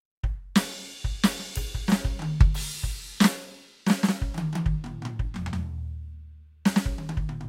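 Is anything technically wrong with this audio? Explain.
Yes. There is a block size mismatch (truncated) running throughout the music. One stage writes longer blocks than the next reads, so the tail of each block is discarded. Each cut produces a steady buzz at about 43 Hz, which fits 1024-sample blocks. Playback speed and pitch stay essentially normal.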